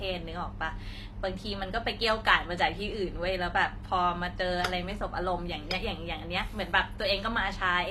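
A speech clip, and the whole thing carries the stacked smear of transcoding between lossy codecs. You get the watery, swirly top end of an MP3 pass, fitting something around 96 kbit/s, with a thinner, synthetic-sounding high band on top that points to a low-rate HE-AAC encode near 24 kbit/s. The likely story is that the second encoder burned its small budget re-coding the first one's artefacts, so both sets sit together and neither cleans up the other.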